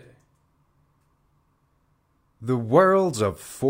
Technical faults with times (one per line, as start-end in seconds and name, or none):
none